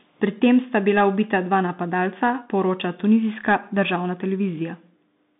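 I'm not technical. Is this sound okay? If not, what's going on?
No, this speech has gone through a Bluetooth CVSD headset codec from start to finish: nothing above 3.8 kHz, so it's muffled, with scratchy s sounds and a gritty hiss underneath.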